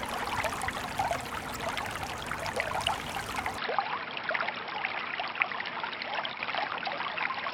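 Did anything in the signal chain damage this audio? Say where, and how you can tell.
Yes, in two places. The first is at the codec: a corrupt frame was decoded at 1.49 to 1.56 s and again at 4.74 s. Each is a short stretch of misplaced energy, the first spanning about three frames and peaking near -25 dBFS, the second briefer and near -30 dBFS. Damaged bits gave the decoder wrong gains or codes, so on a spectrogram each shows as a small block of energy at the wrong frequencies, cut off sharply at frame boundaries.

The second is at the input stage. From 3.58 s to the end the audio turns duller and boxier, with nothing above 5.5 kHz. The change happens with no gap and no noticeable level jump, and a faint new noise floor appears well below the signal. The likely cause is an input switched to a poorer device, such as another microphone or a headset's call profile. On a spectrogram the top band goes abruptly empty at 3.58 s, while the waveform envelope stays continuous.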